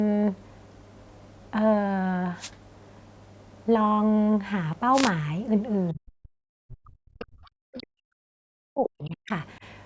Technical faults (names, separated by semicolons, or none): wireless microphone noise hit; speech suppressed in double talk; other side's voice leaking through